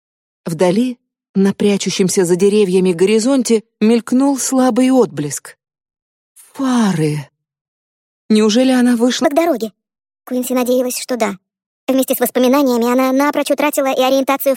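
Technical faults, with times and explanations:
9.24–14.56 s, section at the wrong speed: the sound abruptly runs 1.37 times too fast, pitch rising about five semitones with it, likely from playback against a mismatched clock.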